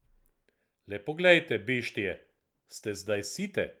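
From 2.1 s to 3.57 s there is a call bitrate drop: the encoder's bit budget collapses, and the speech turns coarse and muffled, losing its upper frequencies for about 1.4 s. The degradation fits a fall from roughly 48 kbps to 18 kbps.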